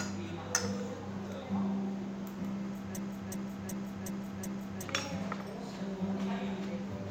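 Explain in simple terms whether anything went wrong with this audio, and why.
Something did go wrong. From 2.97 to 4.83 s there's a system hang loop: the computer froze while the sound card kept replaying one 0.37-second chunk, five times over. About two seconds of real sound got skipped.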